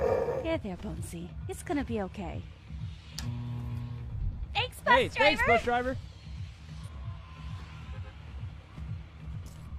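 At 3.86 s, and again from 6.83 to 6.89 s, there's a short burst of damaged data in a compressed stream, each one about 55 to 60 ms long. Some of the encoded bytes there are wrong, so the decoder chokes on those frames, loses its place and has to hunt for the next valid frame header before it can carry on. What you hear is a brief glitch cutting into the sound at each spot.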